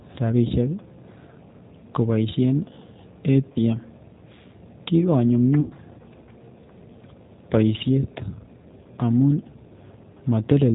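G.729 codec throughout: the speech is rebuilt at 8 kbit/s from a vocal tract filter and pulse excitation, cutting everything above 4 kHz and sounding plainly rough and synthetic.

VoIP packet loss concealed by the speech codec at 3.52 to 3.58 s (30 ms lost) and 5.61 to 5.73 s (90 ms lost): the decoder extrapolates, giving a fading buzzy tone or coloured noise before the voice recovers.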